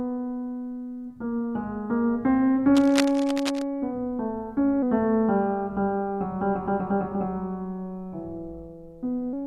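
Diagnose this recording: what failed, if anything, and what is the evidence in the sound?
From 2.74 to 3.62 s there is cable scratch noise in the analogue wiring: dense, uneven crackle and rustle sits over the music at roughly 10 dB below it. The likely cause is a worn cable, connector or control being moved, so its contact resistance flickers and injects noise bursts. On a spectrogram this appears as ragged, broadband vertical streaks across that span. The waveform shows jagged spikes riding on the music envelope.

From 4.82 to 9.33 s a section plays at the wrong speed, at 0.893 times normal, so the music drops about two semitones and drags. Speed and pitch fall together, which points to a playback-stage clock mismatch, likely an editor or player running the material against the wrong rate. On a spectrogram every harmonic line steps down at 4.82 s, and note onsets spread further apart. 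The waveform's transients are similarly stretched in time.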